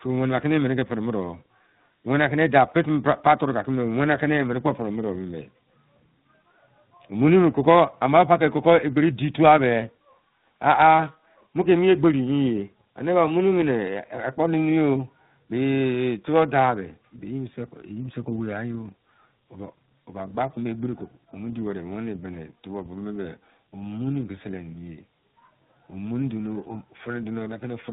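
Throughout the clip the speech shows tandem speech coding: it passed through an iLBC link at 13.33 kbit/s, was carried as G.711 A-law at 64 kbit/s, then re-encoded as G.726 at 32 kbit/s, so two lossy speech coders worked in series, the second on the first's damaged output. The result is a rough, warbly texture and a muffled top end with nothing above about 3.9 kHz.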